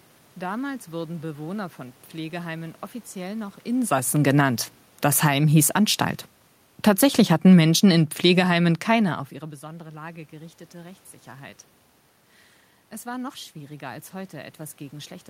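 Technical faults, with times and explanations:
6.72–9.31 s, automatic gain falling: the gain control judged the input too loud or its background noise too strong and eased its gain down by about 5 dB over these 2.6 seconds, so the speech and the room noise behind it sink together, settling lower just before "ihre besondere".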